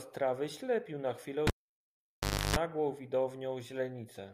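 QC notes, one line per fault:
1.47 to 2.56 s, cable pulled and plugged in: a sharp pop as the live connector breaks contact, then about 1.04 s unplugged, mostly near silence with the signal path open. For roughly 0.31 s of that time only the tip touches, leaving the input floating, so it picks up a 50 Hz mains buzz. A second pop follows when the sleeve seats and the audio returns.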